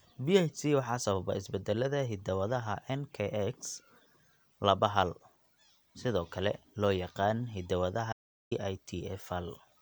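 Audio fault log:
8.13 to 8.51 s, audio dropout to silence: the input signal was likely lost for a moment while recording carried on writing silence, so the speech cuts off abruptly into 0.39 s of dead silence with no room tone, then resumes mid-flow with that stretch missing.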